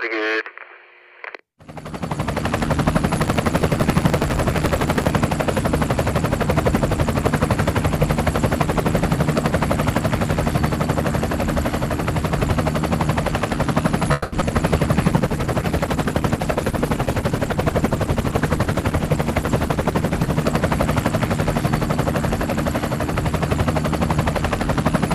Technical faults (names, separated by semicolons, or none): buffer tearing; call audio freeze; short concealed packet loss; call bitrate drop